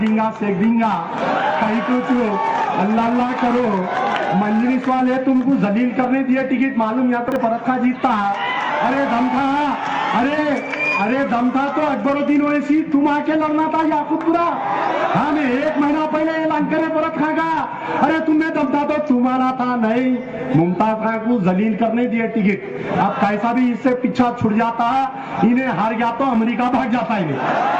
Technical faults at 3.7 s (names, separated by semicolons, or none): none